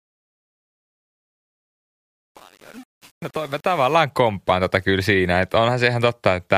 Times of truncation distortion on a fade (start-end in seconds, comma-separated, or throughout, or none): 0.00-3.95